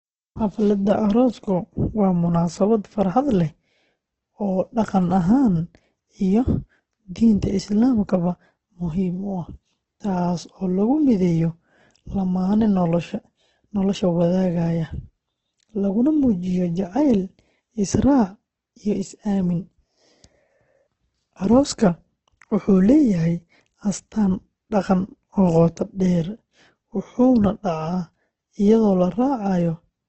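Speech carries heavy damage from what is likely Opus compression throughout. Nothing reaches above 8.1 kHz, and the voice sounds rough and grainy, with noisy texture filling in where detail is missing. That graininess separates it from MP3 damage: the spectrum has few holes and little swirling, because the encoder's music mode keeps each band's energy and papers over the gaps with noise, consistent with a very low rate near 12 kbps.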